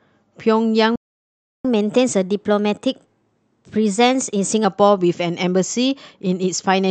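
Speech that cuts out in a playback stall from 0.95 to 1.65 s: the output falls silent for about 0.69 s, most likely because the player ran short of data or its thread was held up. On a waveform this is a flat, empty gap; a spectrogram shows a blank vertical band across all frequencies. Right after, from 1.65 to 4.65 s, comes catch-up at higher speed: the backlog is resampled to play at 1.1 times normal speed, lifting pitch by roughly one and a half semitones. On a spectrogram the harmonics sit slightly higher and syllables are compressed in time, then both return to normal at 4.65 s.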